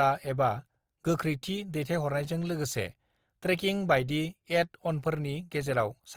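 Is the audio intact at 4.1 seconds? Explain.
No. At 4.1 seconds the speech carries Opus compression damage, as it does throughout the clip. The sound is plainly rough and grainy, with a noisy texture where tones should be clean. The full bandwidth is still there, so it is not muffled. This likely comes from Opus in its music mode at a low rate, which fits roughly 24 kbps. Short of bits, the encoder fills bands with noise or copied lower bands.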